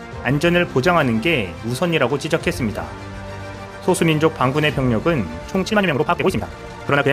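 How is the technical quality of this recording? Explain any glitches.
There's one real glitch, and it's right at the tail. From 5.57 s through to the end, there's a time-stretched section where the audio suddenly runs at double speed but the pitch doesn't budge. The likely cause is software squeezing that stretch to fit a shorter slot, keeping pitch by chopping out short slices and butting the rest together. That's why it comes across rushed.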